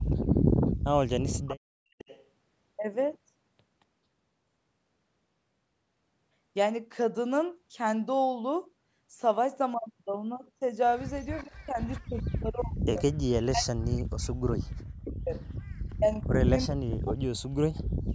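Speech recorded over a call, band-limited to nothing above 8 kHz by the call's microphone processing, carries an echo leak: a delayed copy of the speech, 423 ms behind, appears at 1.48–2.23 s (only about 15 dB down), 11.35–12.01 s and 15.1–15.5 s (about 20 dB down), with a very faint trace at 0–0.04 s. This is likely the far end's loudspeaker sound not being fully cancelled. On a spectrogram it shows as ghost copies of the harmonic patterns, shifted right. Speech suppressed in double talk also occurs at 11.43–15.37 s and 15.96–18.14 s. The talker's level is pumped down in pieces by as much as about 40 dB, over roughly three seconds and two seconds respectively. On the waveform this looks like chopped, collapsing envelopes, and the spectrogram shows energy and the upper band dropping out. The likely cause is an echo canceller muting both voices while they overlap.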